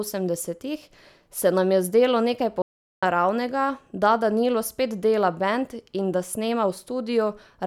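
At 2.62 s the input feed was likely lost while the recorder kept writing zeros, an audio dropout to silence. After "nam je zdelo nekaj" the speech stops dead for about 0.41 s of total silence with no room tone. It resumes abruptly at 3.03 s on "naravnega da".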